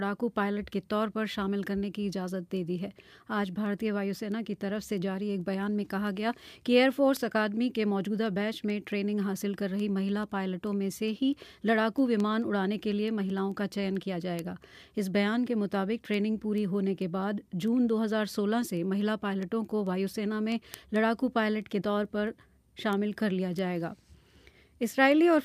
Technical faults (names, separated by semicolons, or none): word clock ticks